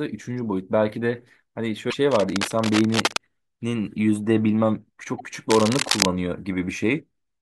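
Speech, with two kinds of trouble running through it. There are two brief glitches from damaged data in the compressed stream, one at 1.87 to 1.94 s and a shorter one at 5.18 to 5.21 s. Each is a quick disruption, a chirp, squawk, click or short hole, where the decoder hit corrupted bytes, couldn't make sense of those frames, and had to hunt for the next valid frame header to get back in sync. Then there are two stretches of cable scratch noise: dense, ragged rustling from 2.11 to 3.17 s, sitting a little under the speech, and again from 5.50 to 6.05 s, where it's roughly as loud as the speech itself. That uneven crackle is likely from a worn cable, connector or control being moved, with its contact resistance jumping around and spraying bursts of noise into the signal.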